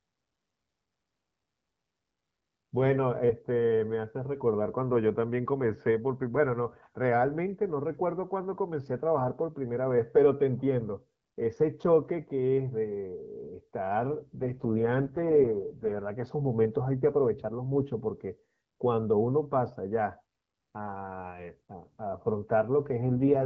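From 14.24 to 16.02 s and again from 23.06 to 23.45 s, an AMR rate drop leaves fewer bits for the speech, consistent with 12.65 falling to 6.6 kbit/s. The wideband voice turns rough and synthetic, with no gap and no narrowing of the band.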